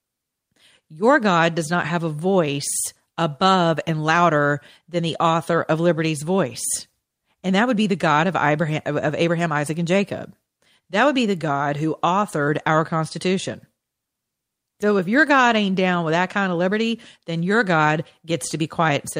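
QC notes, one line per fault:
No audible faults found in this speech recording.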